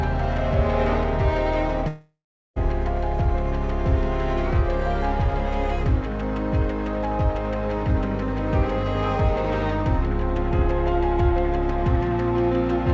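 At 1.88 s the sound smears into a buzzy, fading hiss that dies away to about 0.4 s of silence, and at 2.58 s the audio picks up again with a piece missing. This is likely a long network dropout: roughly 0.7 s of packets never arrived, so the receiver stretched the last sound it had to cover the gap until it ran out, and that stretch is lost for good. The band stops at 8 kHz, which fits a G.722 call codec.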